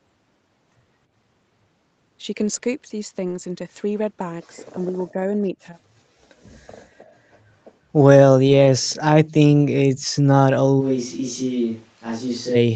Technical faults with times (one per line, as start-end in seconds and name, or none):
2.41-2.63 lost packet rebuilt from error correction
3.27-3.37 lost packet rebuilt from error correction
5.11-5.77 speech suppressed in double talk
7.04-7.37 echo leak
8.47-8.53 lost packet rebuilt from error correction
9.97-10.05 echo leak
10.65-10.67 lost packet rebuilt from error correction
10.82-12.54 switch to a distant microphone